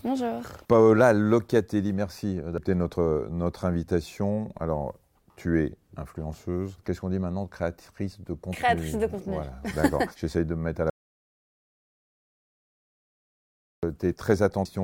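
At 2.58 s, just before "notre notre invitation", a brief glitch marks damaged data in the compressed stream. The decoder misread a corrupted frame, lost sync and searched for the next valid header. On a spectrogram this shows as a thin vertical smear of broadband energy. In the waveform it appears as a small discontinuity.

From 10.90 s to 13.83 s, right after "de me mettre à", the speech cuts out completely for about 2.9 s. This is an audio dropout to silence. The waveform sits flat and the spectrogram is blank, with no room tone at all. The speech resumes mid-flow. The likely cause is a lost input, such as a disconnected device or a failed link, while the encoder kept writing silence.

A second stretch of corrupted data, 14.65 to 14.75 s and about 90 ms long, produces a short glitch as the decoder stumbles over broken frames. It shows as a short patch of garbled, smeared energy unlike the surrounding speech harmonics.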